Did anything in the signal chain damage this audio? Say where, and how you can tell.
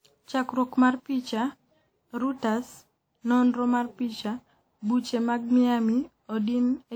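Yes, at the codec stage: the speech was likely run through a WMA encoder and decoder around seven times in succession, and the character fits a chain at about 96 kbit/s. This is generation loss. Each new pass quantises on a shifted frame grid, so noise and spectral gaps pile up. Throughout the clip the speech sounds swirly, smeared and hollow, more than that bitrate alone would cause, and consonant attacks are blurred. The band still reaches about 20.1 kHz.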